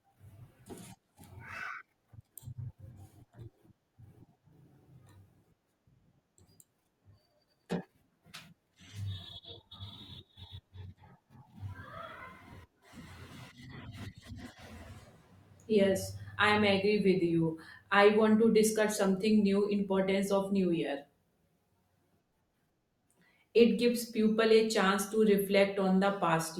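Speech clip with two instances of corrupt frame decoded: short blips at 12.19 s (a couple of frames, peaking near -35 dBFS) and 16.13 s (one frame, quieter, around -45 dBFS), just before "i am". Flipped bits sent misplaced energy through the decoder, showing as brief vertical smears on a spectrogram.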